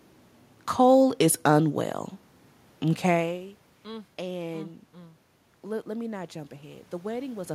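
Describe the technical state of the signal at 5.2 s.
At 5.2 s the signal is intact, with only the ordinary background noise of the room beneath the speech.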